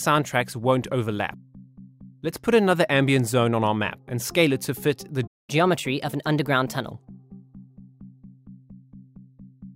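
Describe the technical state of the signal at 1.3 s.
At 1.3 s the signal is intact, with no audible dropout, distortion, glitch or other technical fault at that moment.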